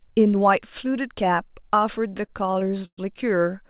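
From 2.1 to 2.99 s, repeated stalls (stutter): the jitter buffer keeps running dry, and the last sound is held for up to 122 ms. Speech drags but, unlike packet loss, nothing drops out.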